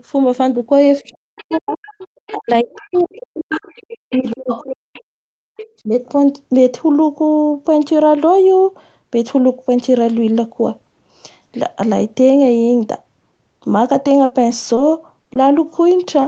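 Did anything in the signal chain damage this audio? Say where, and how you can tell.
Yes. Speech suppressed in double talk, 1.01–4.99 s and 5.83–5.88 s, at the call-processing stage: the echo canceller likely ducked the talker, by about 40 dB at worst.

Other side's voice leaking through, 1.07–5.02 s at about −15 dB and 5.57–5.66 s at about −20 dB: a second voice is audible, likely residual loudspeaker echo the canceller missed.

Repeated packet loss (robotic sound), 14.03–14.79 s, at the network stage: four gaps, the longest 60 ms, were patched by stretching prior sound, giving choppy audio with pieces missing.

Short concealed packet loss, 15.23–15.27 s and 15.33–15.37 s, also network: each 20 ms hole was filled by extending the last sound, heard as a brief smear.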